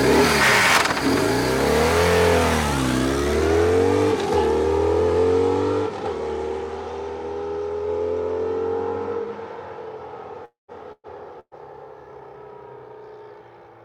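Long network dropout, 10.45 to 10.71 s: the last sound is stretched into a fading buzz or hiss, then about 150 ms of silence follows before the audio resumes with roughly 240 ms of material gone. This is likely a long stall in network delivery that the receiver concealed.

Burst of packet loss, 10.92 to 11.07 s and again 11.40 to 11.54 s: each time about 120 ms of audio never arrives in time, so the receiver holds the preceding sound and fades it, leaving roughly 40 ms and then 50 ms of silence before playback skips ahead.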